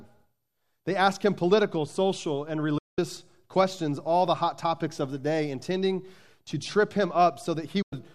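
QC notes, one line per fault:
2.78–2.99 s and 7.82–7.93 s, digital broadcast dropout: after "him political social and" the sound fades out in 8 ms and returns at "questions all the hot". A shorter hole comes near the end. The receiver likely muted on bad frames, so roughly 190 ms and 96 ms are simply gone.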